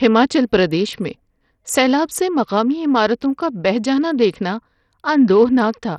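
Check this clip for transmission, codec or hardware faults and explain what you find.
One codec fault is present, and it affects the whole clip.

Likely Bluetooth SBC compression, running from start to finish. A small bit pool, consistent with about 64 kbps, starves the upper sub-bands and coarsely quantises the rest. Nothing remains above 14.7 kHz, the treble flickers, and heavy gritty, aliased roughness rides on the speech.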